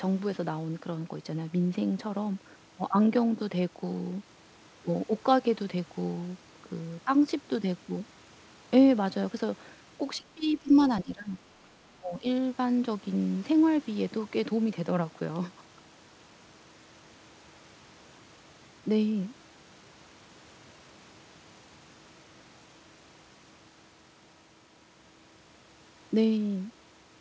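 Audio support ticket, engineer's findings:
Speech suppressed in double talk, 10.17–10.72 s, 11.02–11.4 s, 12.0–12.27 s. Likely echo canceller unable to separate near-end talker from loudspeaker echo, attenuating both. Speech dips about 20 dB in the first two, about 15 dB in the third. Call path band-limited, nothing above 8 kHz, consistent with G.722 wideband.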